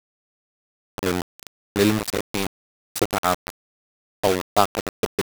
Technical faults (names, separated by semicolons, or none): low bit depth without dither